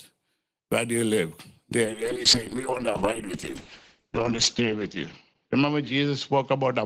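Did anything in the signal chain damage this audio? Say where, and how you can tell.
Yes. A call bitrate drop hits the codec stage from 1.87 s to the end. Bandwidth shrinks from 20 kHz to 8 kHz. The speech turns coarse and muffled, worst for 2.6 s. That points to the encoder being cut from 32 to 7 kbps.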